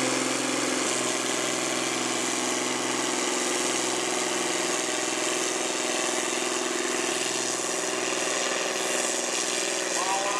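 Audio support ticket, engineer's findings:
Compressed frames skipped at 7.1 s: decoder dropped a run of missing or rejected frames, probably around seven, given a frame length of 26.1 ms. The sound jumps ahead by roughly a fifth of a second, joined by a short smeared blip, not a hard click.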